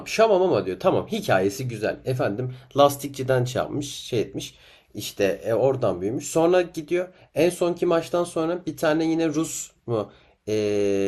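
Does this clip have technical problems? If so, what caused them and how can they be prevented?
Yes. Throughout the speech the sound is dull and carries a gurgling, granular roughness, with the upper frequencies flickering in and out. This is likely MP2 compression starved of bits, which fits a rate of about 80 kbps: the encoder shuts off upper sub-bands and coarsely quantises the rest. Encoding at a higher bitrate or with a more efficient codec would prevent it.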